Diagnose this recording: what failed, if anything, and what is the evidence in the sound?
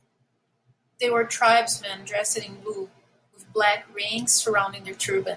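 Nothing in the signal chain audibly failed: the speech level stays steady and continuous, with no gaps, discontinuities or level breaks anywhere along the recording.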